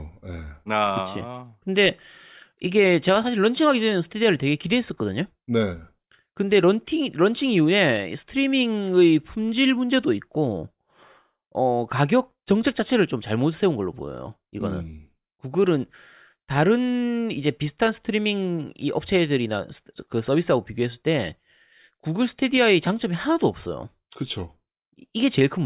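No technical faults are audible.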